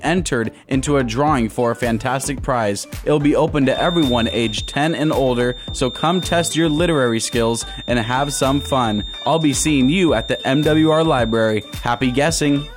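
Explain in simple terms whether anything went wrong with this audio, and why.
From 3.61 seconds until the end, a thin, steady whistle sits at about 3.6 kHz behind the sound. It is a feedback whistle, quiet and well below the main audio, and its level swells and fades slowly. The likely cause is that the loudspeaker output is leaking back into the microphone, forming a loop that is balanced right at the edge of feedback. One high tone keeps ringing without building into a full howl.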